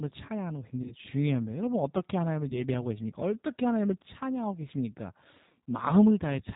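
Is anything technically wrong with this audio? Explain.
Yes. Throughout, the speech is band-limited below 4 kHz and sounds rough and synthetic, pointing to the G.729 codec at 8 kbit/s, modelling speech as filter plus pulses rather than dulling it evenly. VoIP packet loss concealed by the speech codec occurs at 0.82–0.95 s, where about 40 ms is lost, and at 2.49–2.63 s, where about 20 ms is lost. The decoder stretches its last pitch and filter into a fading buzzy tone or coloured noise, and the voice stays weak or distorted for a short while after the gap, unlike a clean dropout of silence.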